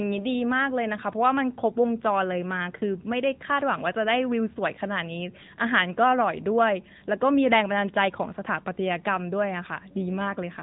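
From start to finish the speech carries the sound of the AMR narrowband mobile codec. The signal was squeezed through an 8 kHz-sampled vocal-tract model, so nothing above 3.8 kHz survives, leaving a muffled telephone tone with a plainly audible buzzy, synthetic edge, which fits a mid-rate mode around 10.2 kbps. On a spectrogram the energy stops at a hard ceiling near 3.8 kHz, with blank space above it for the whole clip.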